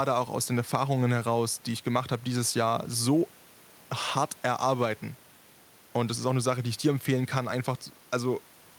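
No technical faults are audible.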